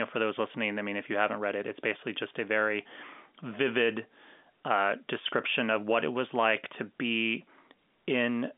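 No technical faults are audible.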